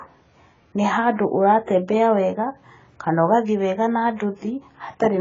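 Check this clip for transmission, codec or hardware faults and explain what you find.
There is one fault, and it runs through the whole speech clip: AAC compression, most likely from an AAC-LC encoder squeezed to a very low rate, with the damage consistent with something around 16 kbps. Starved of bits, the encoder quantises each frame's spectral lines coarsely, drops whatever it can't afford, and cuts off the top entirely. Nothing reaches above 7.5 kHz, so the speech sounds dull and muffled, and the heavy coding leaves a smeared, warbling, fizzy edge on sibilants and held sounds.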